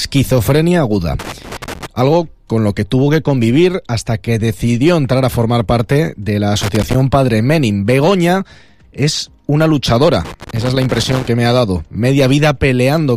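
At 1.19 to 1.86 s, 6.61 to 6.94 s and 10.25 to 11.28 s the sound breaks into loose connector crackle: a worn or dirty contact keeps making and breaking, chopping the signal and adding pops from any DC on the line. Each burst is ragged and scratchy with uneven spacing. Regular digital clicks or dropouts would have steady timing, and vinyl crackle would run continuously, so the bursts point to a contact disturbed by movement.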